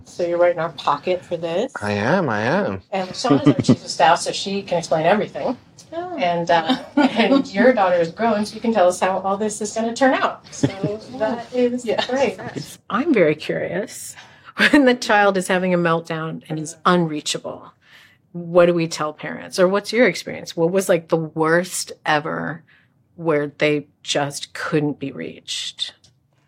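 No faults detected: level, timing and continuity hold steady throughout.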